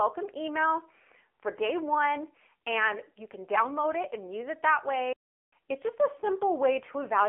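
Speech passed through the AMR narrowband mobile codec at 7.4 kbps throughout, confining it to a 300 Hz to 3.4 kHz line band with nothing above 3.5 kHz, so it sounds muffled, buzzy and plainly synthetic. A playback stall, likely from the player running out of data or a blocked thread, drops the sound to silence for about 0.39 s from 5.13 s to 5.53 s, right after "and use it that", before it resumes.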